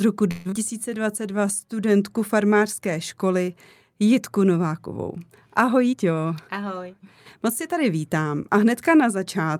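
A speech clip with three timing faults. From 0.31 to 0.54 s the sound smears into a fading buzz of about 206 ms before speech resumes with about 120 ms of audio gone. This is likely a long network dropout, with the receiver concealing the gap rather than going silent. From 0.70 to 1.66 s the speech drags to about 90% speed at unchanged pitch, with drawn-out sounds. This is a jitter buffer slow-down: repeated pitch periods added about 100 ms. From 5.92 to 6.95 s the opposite happens, and speech sounds hurried at about 114% speed with pitch intact. This is a jitter buffer speed-up, trimming roughly 150 ms of excess buffered audio by cutting out short pitch-period slices.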